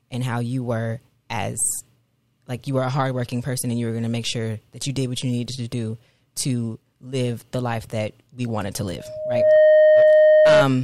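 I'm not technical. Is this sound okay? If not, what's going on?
No. Right after "that we wanted to", at 8.97 s, a loudspeaker feedback squeal starts. The microphone picks up its own loudspeaker, and one tone near 617 Hz feeds on itself. It swells over about half a second, ending louder than the speech, and stops at 10.65 s.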